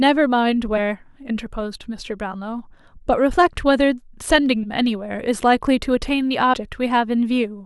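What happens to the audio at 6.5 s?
At 6.53 s the audio has compressed frames skipped. A few 20 ms frames never reach the output, so the sound jumps forward by roughly 70 ms.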